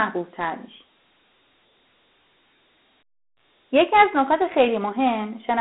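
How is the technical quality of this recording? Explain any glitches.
The quality is poor. The speech sounds like it came from a phone system. Dialogic VOX ADPCM runs throughout: 4-bit adaptive coding, consistent with 32 kbps, leaves a gritty hiss on the speech. The band is narrow, about 250 Hz to 3.4 kHz, with nothing above 3.9 kHz.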